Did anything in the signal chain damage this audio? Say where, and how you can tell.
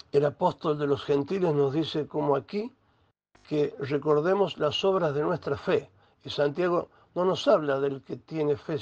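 No, nothing damaged this audio.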